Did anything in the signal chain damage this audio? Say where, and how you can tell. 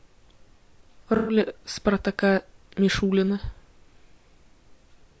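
Yes, at the codec stage throughout. The speech is rough and grainy, with noise between the pitch harmonics and a thin, synthetic top band. On a spectrogram the harmonics look smeared and the upper band patchy. The likely cause is low-delay AAC compression (AAC-ELD), whose short frames resolve pitch poorly at a bitrate around 32 kbps.

Between the codec and the network, from 1.16 to 1.36 s there is a smeared, noisy, phasey patch: AAC frame loss with concealment. The decoder rebuilt the missing frames from the last good spectrum. The spectrogram shows a blurred block without clear harmonics, and the waveform loses its regular periodicity. The length points to several consecutive frames lost.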